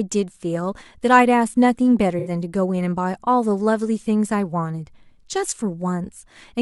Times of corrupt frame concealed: 2.19-2.30

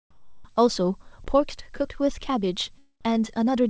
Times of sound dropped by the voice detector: 1.24-1.26

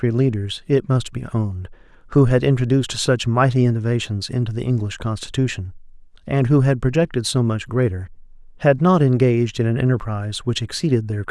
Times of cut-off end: none

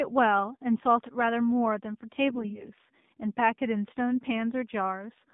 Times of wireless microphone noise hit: none

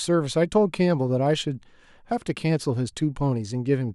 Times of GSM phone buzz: none

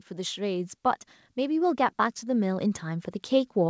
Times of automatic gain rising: 0.08-3.69

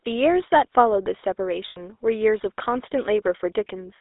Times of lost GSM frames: 1.68-1.79

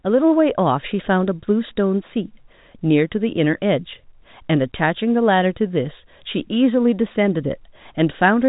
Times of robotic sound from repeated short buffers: none

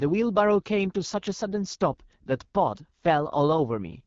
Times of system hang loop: none

